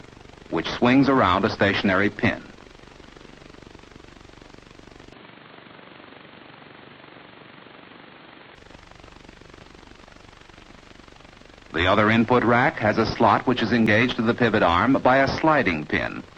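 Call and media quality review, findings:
Dull, boxy band from 5.13 to 8.55 s, nothing above 4.4 kHz, added noise floor roughly 30 dB under signal, no level jump or gap at either edge. Likely input switched to a poorer device, narrower band and own noise.

Brief disturbance at 13.87 s. Damaged data in a compressed stream. Corrupted bytes in the encoded audio at that point. Decoder misreads the frame, loses sync, resumes at the next valid frame header.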